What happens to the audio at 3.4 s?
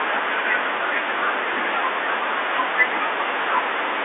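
At 3.42 to 3.44 s there is a brief packet loss with the last packet repeated. About 20 ms of audio went missing, which fits a single lost 20 ms packet, and the receiver replayed the preceding packet to fill the gap. That single repeat sounds like a small blip. On a waveform the segment appears as a copy of the previous 20 ms.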